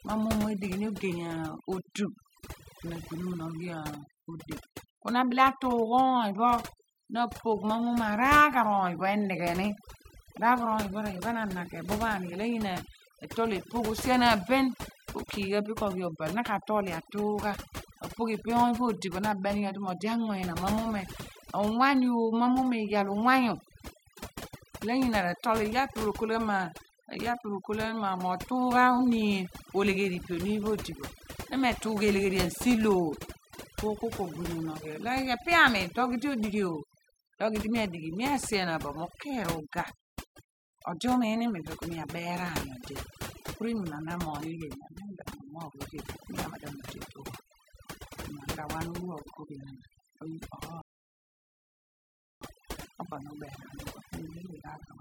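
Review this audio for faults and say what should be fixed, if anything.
Overdone noise removal runs through the whole clip. The reducer is set so hard that any band near its noise estimate gets pulled down, taking quiet parts of the voice with it. The background sparkles. Back the reduction amount off and leave a little room noise in.

There's a rebuffering stall from 50.82 to 52.42 s. The player ran dry, went silent for 1.6 s, then picked up exactly where it stopped, so nothing's missing but the pause is added. A bigger playback buffer before resuming would prevent it.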